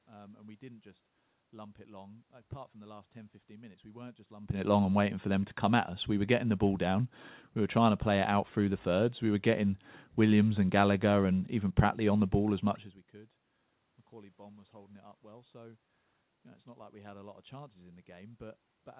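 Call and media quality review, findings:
No faults found. Audio is band-limited with nothing above 4 kHz, consistent with a G.711 mu-law call path at 64 kbps, and the level shifts around 4.5 s and 12.5 s come from the talker moving relative to the microphone.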